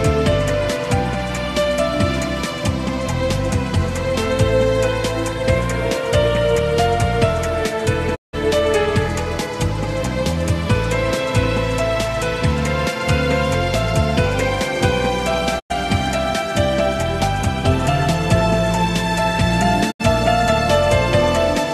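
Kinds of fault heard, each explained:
Digital broadcast dropout, at 8.14 to 8.35 s, 15.58 to 15.72 s and 19.90 to 20.01 s: the receiver stopped getting valid frames and muted until good ones arrived, so the sound fades out over about 20 ms and falls silent. The holes last about 170, 100 and 70 ms, sizes that point to whole frames of roughly 24 ms being discarded. Whatever was transmitted during each gap is simply missing.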